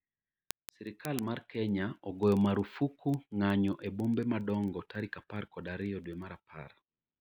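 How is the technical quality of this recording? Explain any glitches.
Technical quality is poor because of one continuous fault. Word clock ticks run from 0.14 s to 7.18 s. The receiving device runs on its own clock, roughly 500 ppm off the sender's. It therefore slips one sample about every 50 ms, laying a steady, sharp ticking of uneven strength under the speech.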